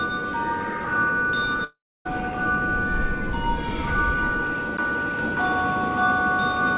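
From 1.64 to 2.10 s there is a long network dropout, likely from lost packets. The last sound carries on as a fading buzz, then about 0.28 s of silence. Audio resumes with roughly 0.42 s missing. The spectrogram shows a smeared, dimming band, then a blank gap.

From 5.19 s to the end, a doubled audio track appears abruptly: a second full-band copy about as loud as the original, trailing by roughly half a second with no reverberant tail. The waveform shows each envelope repeated about 0.5 s later, and the spectrogram shows matching patterns similarly offset below the 4 kHz call-codec ceiling.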